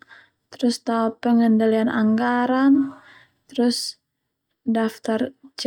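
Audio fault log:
Nothing to log on this speech clip; it comes through without a single problem to note.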